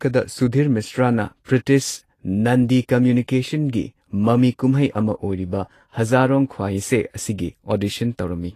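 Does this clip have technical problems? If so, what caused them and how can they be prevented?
Yes. Throughout the speech the treble sounds hissy and grainy, consonants lose their crispness, and nothing is present above about 14.2 kHz. This is likely Vorbis compression at a low setting: the encoder trimmed the top of the spectrum and quantised the remaining high band so coarsely that its detail turned into noise-like texture, which fits a bitrate around 35 kbps. Encoding at a higher Vorbis quality setting, or keeping a lossless master, would prevent it.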